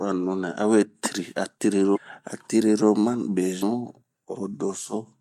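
At 1.93 s the speech breaks into a short blip lasting about 40 ms, ending at 1.98 s. This is damaged data in a compressed stream. Some bytes in the coded frames are wrong. The decoder misreads them, loses its place, and hunts for the next valid frame header. For that instant it outputs a glitch instead of speech. The same fault returns from 3.59 to 3.63 s, again a brief glitch of similar length.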